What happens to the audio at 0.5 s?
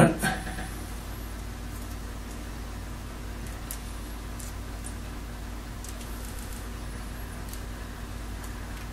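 At 0.45 to 0.69 s there are repeated frames: a 116.1 ms block of compressed audio plays two extra times, a stutter that adds 232.2 ms. On a spectrogram or waveform, the same short pattern appears three times in a row, back to back.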